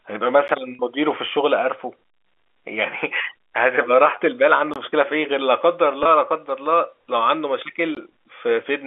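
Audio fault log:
0.48, 4.74–4.76 and 7.95 s, block of digital silence: the output buffer was not filled in time, so whole blocks were zeroed. The gaps last about 11, 21 and 18 ms. The first and second fit a 512-sample and a 1024-sample buffer. Each cut drops to digital silence and returns with no fade, so the hard edges give a tick at 0.48 s and short holes at 4.74 and 7.95 s.
0.75–0.79 and 6.03–6.05 s, packet loss with pitch repetition: speech packets went missing, 40 ms of audio at 0.75 s and 20 ms at 6.03 s, which points to two 20 ms packets and then one. The receiver bridged each gap by repeating the last pitch period. The sound briefly holds on one buzzy, fading tone before speech resumes through a short cross-fade. The held stretch at 0.75 s is longer, heard over the narrow 300–3,500 Hz telephone band of the G.711 line.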